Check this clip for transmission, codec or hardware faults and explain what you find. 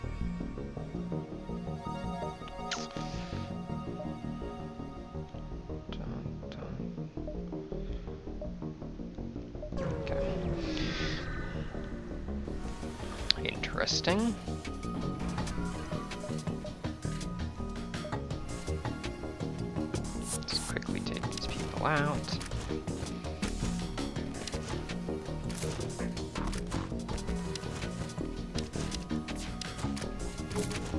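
No transmission, codec or hardware faults detected anywhere in the clip.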